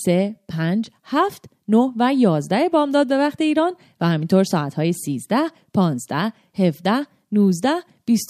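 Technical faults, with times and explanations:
Nothing technical goes wrong in this bit of speech, so there's nothing to list here.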